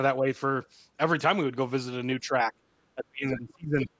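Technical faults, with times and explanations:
0.19–0.26 s, 2.2–2.6 s and 2.95–3.89 s: speech suppressed in double talk. The speech dips, slightly at first, then by about 10 dB, then by up to roughly 30 dB across most of the last stretch, likely because the echo canceller, facing both sides at once, turned everything down.
3.81–3.86 s: the other side's voice leaking through. A brief scrap of a second voice, roughly 10 dB below the speech, slips in, likely residual loudspeaker echo that the canceller failed to remove from the microphone signal during the suppressed stretch.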